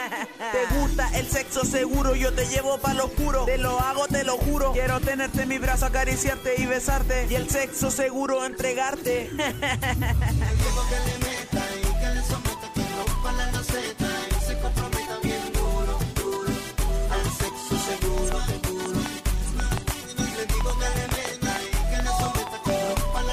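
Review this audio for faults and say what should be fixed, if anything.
From 18.18 s to 23.19 s a train of clicks ticks and pops over the sound at about four per second, unevenly spaced, some twenty near-identical pulses, each peaking well above the surrounding audio and plainly audible in the gaps too. Repeated pulses of the same shape at this rate likely come from electrical interference from nearby equipment or a faulty connection or power supply. Those five seconds need declicking or replacing. To prevent it, keep interfering equipment away from the recording chain and give the interface stable power and a generous buffer.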